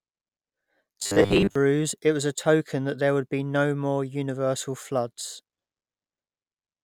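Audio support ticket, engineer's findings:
Robotic sound from repeated short buffers, 1.01–1.56 s, before "it was a token". 100 Hz metallic buzz; likely buffer underrun repeating 10 ms blocks, most real audio skipped.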